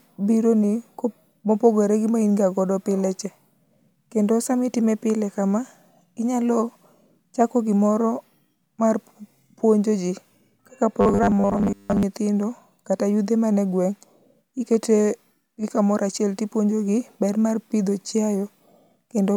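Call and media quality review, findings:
Likely input buffer underrun, 11.01–12.03 s, after "mar puonjo ji kaka": short buffer replayed for most of the span. Robotic sound from repeated short buffers, a rigid 100 Hz buzz, consistent with a 10 ms buffer.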